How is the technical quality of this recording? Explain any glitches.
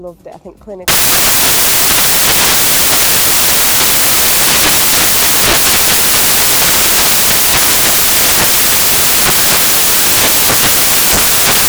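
Poor: from early on the recording is swamped by a byte-level decoding fault. Samples built from the wrong bytes, from 0.88 s to the end: the reader assembles each sample's bytes misaligned or in swapped order, so the rapidly changing low bits land in the high part of each value. The result is loud, harsh broadband noise, close to white on the louder sounds.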